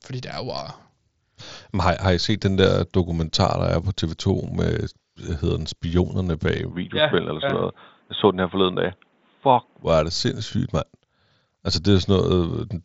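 Right after "hedder den spionerne bag", at 6.72 s, the speech abruptly turns dull and boxy, with nothing above 3.8 kHz, down from the roughly 7.7 kHz the mSBC headset link carries before it. A faint new background hiss sits well beneath the speech, with no silence at the change and no noticeable jump in loudness. The likely cause is the input switched to a poorer device, a narrower-band microphone or call profile with its own noise, which stays in use until 9.83 s, just before "hvor er det".

At 7.5 s, inside that dull stretch, a brief stutter is heard as 23 ms of sound plays twice. This comes from overlapping chunks: the audio was handled in pieces, and the next piece began before the previous one finished, so their shared stretch is repeated at the join. The timing fits chunks of 3.0 s.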